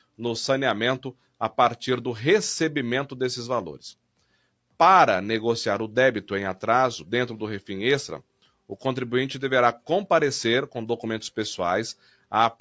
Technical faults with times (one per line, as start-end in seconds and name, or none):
11.99-12.26 sound cut by the noise suppressor